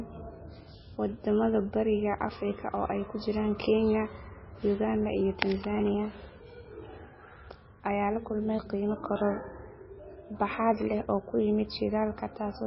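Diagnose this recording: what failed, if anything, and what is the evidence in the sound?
The codec stage is where this went wrong, most likely MP3 compression squeezed hard, which fits a bitrate of roughly 17 kbps. Right through the speech, nothing survives above 5.6 kHz, and the starved quiet bands flicker frame to frame, giving that heavy watery swirl and chirpy sibilants.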